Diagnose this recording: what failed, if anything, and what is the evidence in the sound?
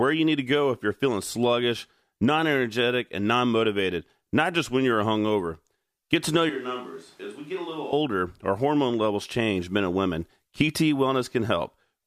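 Switch to a distant microphone, 6.50 to 7.93 s, between "to know" and "our hormone levels change": the speech abruptly turns roomy, hollow and bass-light, roughly 10 dB quieter, with room noise about 30 dB below it. The close microphone's capture likely dropped out, leaving a far pickup.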